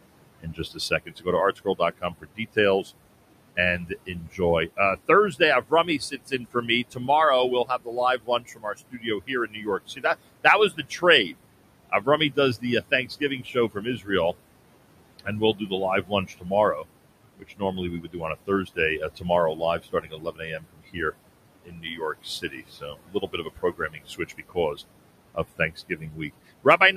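A noise suppressor running over this speech recording pulls the steady room noise down by about 21 dB throughout. That noise sits about 13 dB below the voice, and the background sinks in each pause and swells back under the talker. These are noise suppressor artifacts, the gain decisions made frame by frame showing up as movement in the background.

The same suppressor also misjudges parts of the speech as noise and turns them down with it, by about 20 to 22 dB at the deepest. This speech cut by the noise suppressor occurs from 0.4 to 2.91 s, 3.56 to 7.09 s, 7.65 to 11.33 s, 11.9 to 14.1 s, 15.19 to 16.85 s, 17.39 to 24.8 s, and 25.34 s to the end. Within the stretches, scattered pieces amounting to roughly 0.7 to 4 seconds sound swallowed or faint.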